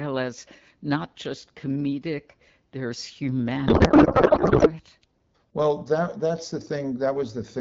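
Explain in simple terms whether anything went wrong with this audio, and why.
One thing did go wrong. From about 3.67 to 4.71 seconds, the speech turns into garbled, warbly noise that barely tracks what's being said. That's a codec payload misread: the two ends of the call disagreed on how the compressed bits were packed, so the decoder pulled each field from the wrong spot. The garbling suggests the data was likely read as if it used a more tightly packed layout than the one the sender actually used. Around that stretch, the HD Voice codec carries the speech clearly, with only light coding wear.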